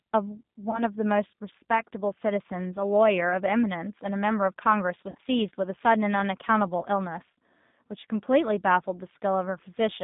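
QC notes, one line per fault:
throughout: G.729 codec. The speech has been squeezed through an 8 kbit/s coder that keeps only a vocal tract filter, a pitch predictor and a handful of pulses per frame, so the timbre is plainly rough and slightly synthetic. The line is confined to roughly 150 Hz to 3.7 kHz, which removes low body and all sibilant air above it. Consonants lose crispness and any background content warbles instead of sounding like steady noise.
0.71 to 0.83 s, 5.10 to 5.19 s, 6.83 to 6.86 s: VoIP packet loss concealed by the speech codec. At each point the decoder lost packets and filled the gap by repeating its last pitch and filter with falling gain, giving a brief stretch of the preceding sound that fades as a buzzy tone or coloured noise. The worst is at 5.1 s, where about 60 ms of audio is missing, scattered over 80 ms with a longest run of 50 ms. The loss near 0.7 s amounts to about 20 ms. 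The loss at 6.8 s is a single dropout of about 10 ms. Because each frame is predicted from the one before, the speech stays thin and distorted for a short while after each gap before it settles.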